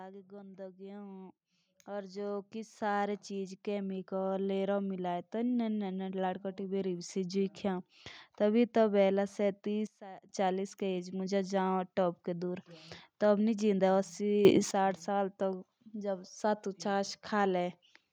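From 0.28 s to 7.43 s the speech and the background noise swell together. The level climbs by about 18 dB over roughly seven seconds. This is automatic gain rising. The gain control judged the input too quiet and kept raising its gain step by step. Because it amplifies everything it receives, the room noise grows along with the speech. The rise is slow, so there is no click or sharp edge, only a steady build.

At 9.87 s the level drops abruptly, by about 18 dB, through to 10.29 s. Speech and background fall together in an instant. This sudden gain jump is likely a digital gain setting applied without any ramp. The change lands between one sample and the next.

At 14.45 s a second sudden gain jump pushes everything up by about 12 dB, lasting until 14.71 s. Again there is no fade, and the likely cause is an unramped gain step.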